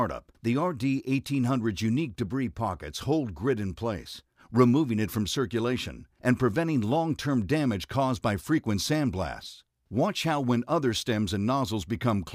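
No technical faults can be heard anywhere in the audio.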